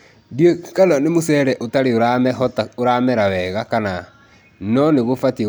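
No audible technical faults anywhere in the speech recording.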